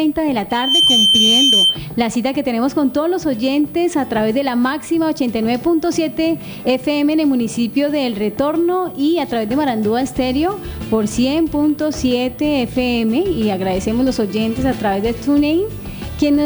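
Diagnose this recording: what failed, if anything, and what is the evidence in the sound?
Loudspeaker feedback squeal from 0.50 to 1.82 s. An acoustic mic-speaker loop runs away at 3.1 kHz, swelling within a fraction of a second to about 5 dB above the sound.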